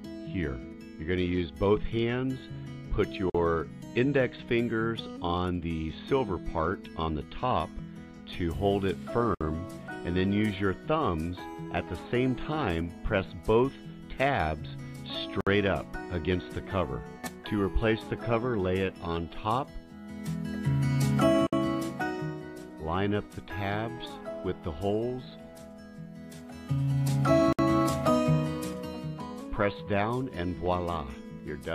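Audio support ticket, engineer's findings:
Gap at a join of encoded pieces, 3.30 s (47 ms), then 9.35, 15.41, 21.47, 27.53 s (60 ms each), every 6.0 s. Separately encoded segments concatenated untrimmed; encoder start delay and last-frame padding leave silence with slightly smeared edges before sound resumes.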